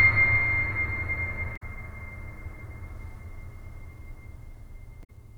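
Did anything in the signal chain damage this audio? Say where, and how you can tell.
Yes. Damaged data in a compressed stream, at the codec stage: short glitches in the music at 1.53–1.63 s and 5.00–5.10 s. Corrupted bytes make the decoder misread frames and resync at the next header.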